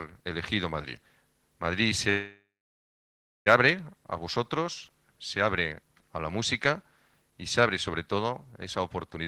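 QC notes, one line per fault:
2.09–3.48 s, call audio freeze: the last sound is stretched into a fading buzz, then about 1.01 s of silence, likely from delayed packets draining the jitter buffer. On a waveform it is a decaying smear, then a flat line. No audio is lost, and everything after resumes 1.37 s late.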